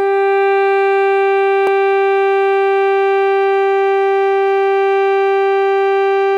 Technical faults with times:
1.67 block of digital silence

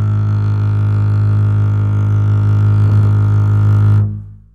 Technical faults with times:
none

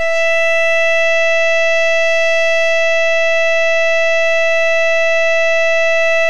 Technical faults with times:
0.00-6.29 DC offset

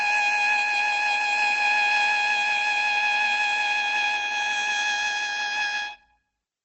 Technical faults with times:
0.00-6.64 Opus compression

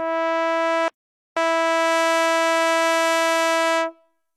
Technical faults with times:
0.00-4.37 HE-AAC compression
0.88-1.37 playback stall
1.37-4.37 time-compressed catch-up

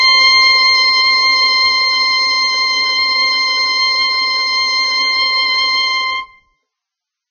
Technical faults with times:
0.00-7.30 Vorbis compression

